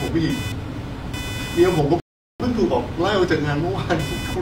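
From the start and throughout, computer activity noise sits under the speech: a buzzing, chirping texture pulsing at around 500 Hz and roughly 15 dB below the speech. Processor or peripheral load is modulating the shared ground of the audio circuit, so the noise follows machine activity rather than the speech.

At 2.00 s a rebuffering stall cuts the audio to silence until 2.40 s. The player ran out of downloaded data and paused for about 0.4 s, then resumed exactly where it stopped. Nothing is lost, but the gap adds time to the clip.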